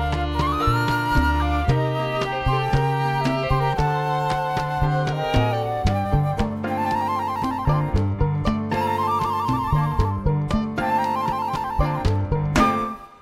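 No technical faults can be heard anywhere in the clip. There is nothing to point to at any moment in the audio.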